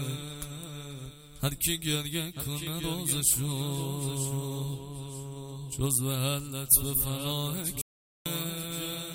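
At 7.81 s the sound cuts to dead silence for 0.44 s, an audio dropout to silence. The likely cause is a lost input while silence kept being written. The waveform shows a flat line and the spectrogram a blank column.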